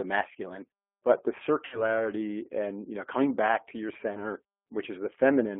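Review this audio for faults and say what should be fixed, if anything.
The whole clip carries G.729 codec damage, and it is plainly audible. The sound points to the G.729A variant at 8 kbit/s. The speech comes through a telephone band of about 250 Hz to 3.4 kHz. Nothing above it survives. The codec does not store the waveform. It rebuilds each 10 ms frame from a vocal tract filter, a pitch predictor and a few pulses. That model gives the speech its rough, synthetic edge. To prevent it, record locally or use a wideband codec at a higher bitrate.

VoIP packet loss concealed by the speech codec occurs twice. The first runs from 1.65 to 2.01 s, after "masculine but the" and before "and you know coming". About 70 ms of audio is missing, which fits seven lost 10 ms frames. The second runs from 4.13 to 4.24 s, after "coming back to your". About 20 ms is missing, which fits two lost frames. In each gap the decoder repeats its last pitch and filter with falling gain. 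This stretches the sound into a buzzy tone or coloured noise. Each frame builds on the one before it, so the disturbance continues past the gap itself. To prevent it, use a steadier network path, or add forward error correction or redundancy with an adequate jitter buffer.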